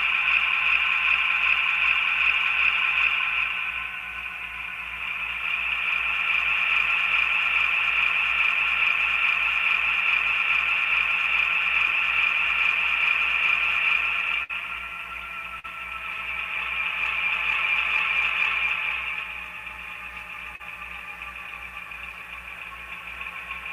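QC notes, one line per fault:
14.43–14.51 s, burst of packet loss: a run of packets never made it in time, so the receiver stretched the last bit of sound for about 58 ms, fading it down, then picked up again with roughly 60 ms of audio simply gone.
15.59–15.66 s and 20.56–20.61 s, short concealed packet loss: two brief dropouts of about 40 ms each, papered over by extending the preceding sound for 44 and 38 ms and blending back, so you hear a quick smear or wobble rather than a clean gap.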